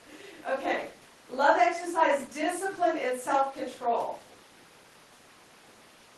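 No technical faults occur in this clip, so there is nothing to describe in time order.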